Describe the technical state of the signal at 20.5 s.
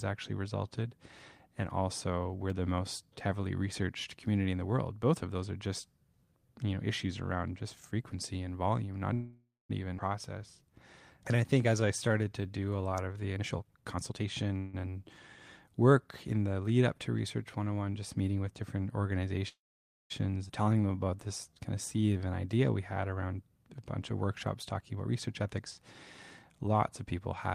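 At 20.48 to 20.51 s the speech lurches forward, joined almost seamlessly across a roughly 12 ms patch, with about half a second simply gone. This is a skip ahead: that stretch of audio was dropped, in transit or by an overflowing jitter buffer, while later audio already waited, cutting playback delay by about half a second.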